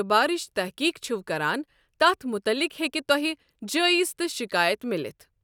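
No technical faults can be heard anywhere in this speech recording, and the signal holds steady throughout.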